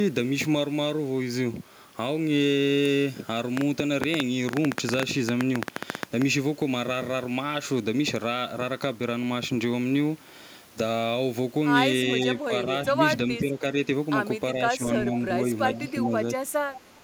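Between 3.57 and 6.23 s, something, likely interference from nearby equipment or a faulty connection, injects a train of clicks. About 9.5 per second arrive at an uneven pace, some thirty in all. They peak roughly 20 dB above the speech as sharp ticking.

From 12.47 s the echo canceller likely cannot separate the talker from loudspeaker echo while both sides speak, causing speech suppressed in double talk. At 12.47, 13.39, 14.55, 15.05 and 16.35 s the voice dips briefly by about 5 to 10 dB.

From 16.74 to 17.01 s an echo leak appears, likely because the far end's echo canceller let loudspeaker pickup through. A faint copy of the speech returns 360 ms late, about 20 dB below the voice.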